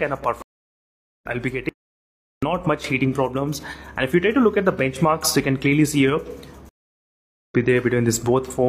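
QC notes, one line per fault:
0.42 to 1.26 s, stream reconnect. The sound stops for about 790 ms, then resumes roughly half a second further on. The connection dropped and the player restarted its decoder mid-stream, so the material that played during the gap is skipped and the restart enters softly.
1.69 to 2.43 s, audio dropout to silence. The sound cuts off abruptly and returns mid-flow after 735 ms of silence, with no room tone underneath. The input was likely lost while recording continued writing silence, so that stretch is gone.
6.69 to 7.55 s, stream reconnect. A second break of about 810 ms, after which the sound resumes roughly a second later than where it stopped. Again a fresh decoder picks up mid-stream, skipping the missed section, with a soft first moment on return.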